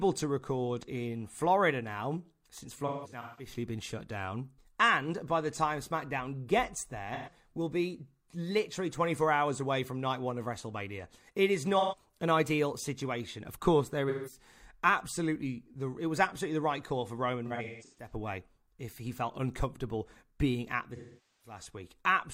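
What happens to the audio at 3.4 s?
At 3.4 s the speech falls inside a stretch of AAC frame loss with concealment running from 2.87 to 3.53 s. About 384 ms of audio went missing in gaps scattered across roughly half a second, the longest lasting around 150 ms. For each gap, the decoder rebuilt the audio from the last good spectrum, so those patches sound smeared, noisy or phasey. On a spectrogram the harmonic detail of the speech blurs into repeated, smeared texture, and the waveform loses its normal syllable shape there.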